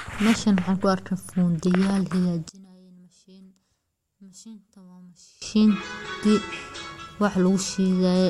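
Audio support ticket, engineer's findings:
One channel inverted, 2.49–5.42 s: speech level collapses by about 27 dB, leaving a faint residue. Likely cause: reversed polarity on one stereo leg, so the centred speech common to both cancels in the mono sum. Check channel wiring.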